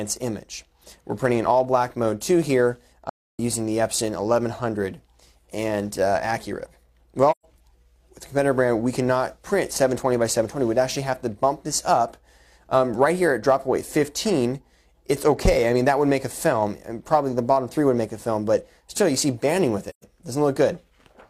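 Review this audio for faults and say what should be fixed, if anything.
There's AAC frame loss with muting in three places: 3.09–3.40 s (about 0.3 s, roughly seven frames' worth), then 7.31–7.45 s and 19.89–20.04 s (each about 128 ms, around three frames). The decoder zeroed the missing frames, and the overlapping windows fade the sound down and back up, so each gap is a soft-edged hole. To prevent it, fix the transport's packet loss or add error resilience or concealment upstream.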